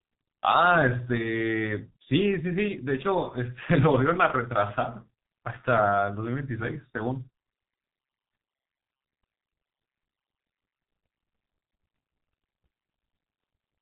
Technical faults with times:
0.00-13.81 G.723.1 codec

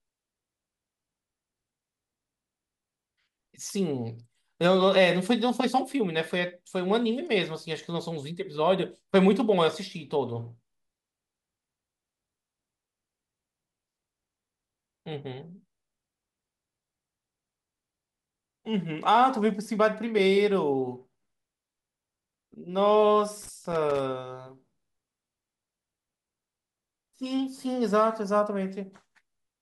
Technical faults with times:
23.42-24.00 loose connector crackle

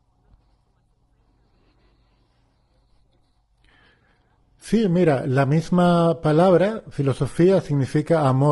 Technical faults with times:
0.00-8.51 low-delay AAC compression

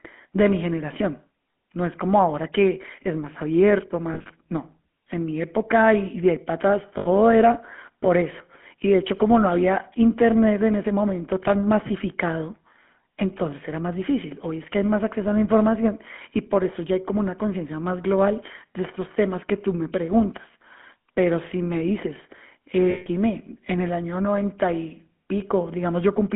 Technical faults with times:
0.00-26.36 GSM full-rate codec
4.14-4.31 lost GSM frames
6.98-7.08 lost GSM frames
22.90-23.07 lost GSM frames

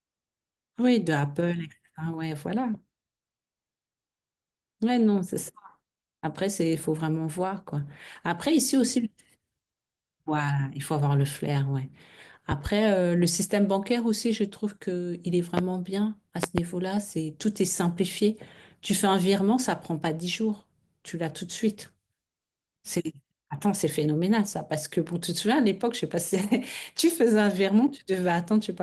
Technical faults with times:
15.57-15.60 loud pop
16.43-16.61 loud pop

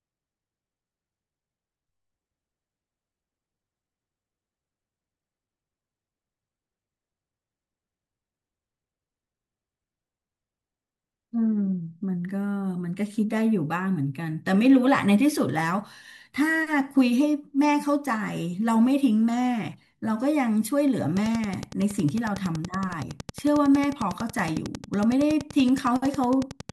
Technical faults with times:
21.17-26.70 train of clicks

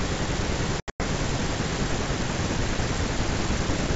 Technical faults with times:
0.80-1.01 packet loss on an ADPCM call

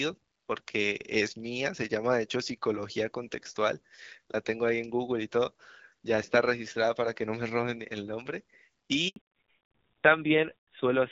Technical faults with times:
9.08-9.16 handover gap
9.16-11.12 fallback to narrowband

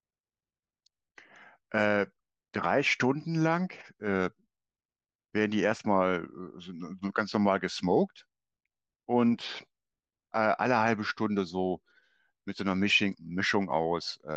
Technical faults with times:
none

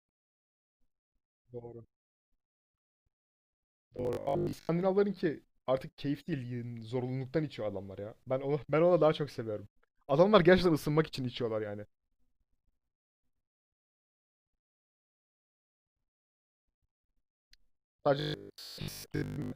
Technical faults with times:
3.97-4.69 robotic sound from repeated short buffers
14.75-15.85 robotic sound from repeated short buffers
18.20-19.54 robotic sound from repeated short buffers

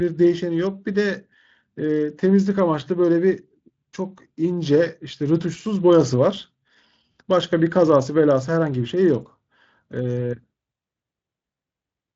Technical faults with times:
none

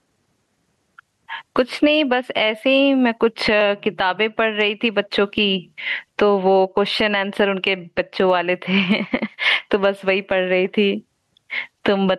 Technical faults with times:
0.00-12.19 gain pumping

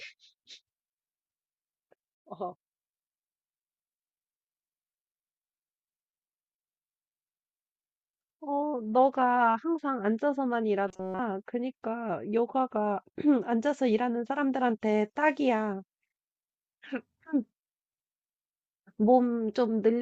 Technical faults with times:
10.88-11.20 robotic sound from repeated short buffers

